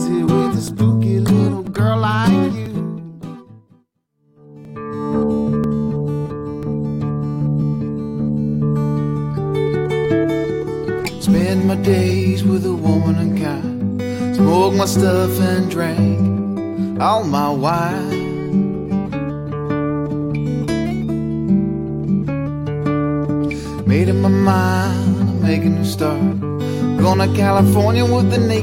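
Tiny skips land at 0.68, 1.67, 2.66, 3.67, 4.65, 5.64, 6.63 and 7.62 s. They come almost exactly once per second. This is overlap between stream segments. The clip arrives in one-second pieces whose time stamps overlap slightly. The player trims that overlap, but the sound was never duplicated. So between about 5 and 19 ms of real audio is lost each time. The waveform jumps across the gap. Each jump is heard as a brief click or tiny skip.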